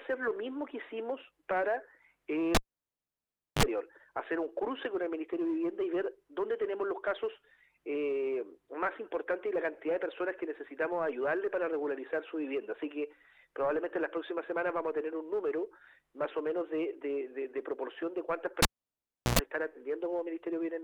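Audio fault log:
2.55–3.63 s and 18.62–19.39 s: cable pulled and plugged in. A pop marks the broken contact. Near silence follows for 1.03 s, then 0.72 s. While only the tip touches, mains buzz sounds for 40 ms at 50 Hz, then 104 ms at 60 Hz. A second pop brings the sound back.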